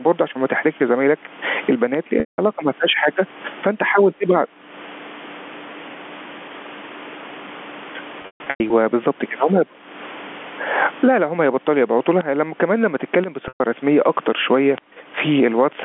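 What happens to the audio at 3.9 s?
At 3.9 s the audio has gain pumping throughout: the gain swings about 20 dB as it is pulled down on loud sounds, likely an over-driven fast limiter, visible as a breathing noise-floor envelope.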